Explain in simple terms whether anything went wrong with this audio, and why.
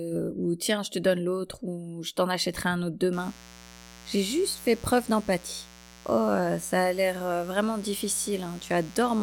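Yes, something went wrong. From about 3.13 seconds, right after "t'en achèterai un autre", a mains buzz starts and runs to the end of the speech. It is a steady, raspy hum sitting under the voice. It comes from the electricity supply leaking into the recording, likely through a light dimmer, a power adapter or a poorly shielded cable. The 60 Hz supply makes sharp spikes twice per cycle, and these add a stack of higher buzzing tones.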